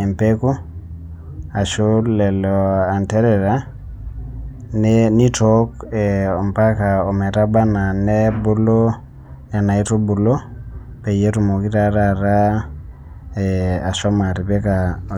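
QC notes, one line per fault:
Nothing to flag on this speech recording; I listened all the way through and didn't hear a single problem.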